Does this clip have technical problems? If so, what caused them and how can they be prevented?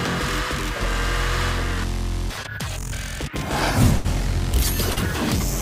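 Yes. A burst of packet loss runs from 3.97 to 4.06 s. About 60 ms of audio never arrived, and the receiver extended the last sound for 69 ms, fading it out before resuming later. A larger jitter buffer or forward error correction would prevent this.

A short concealed packet loss follows at 4.92 to 4.98 s. About 40 ms went missing, and the decoder patched it with 40 ms synthesised from the preceding sound, heard as a brief smear. Redundant packet coding or a more stable network path would prevent it.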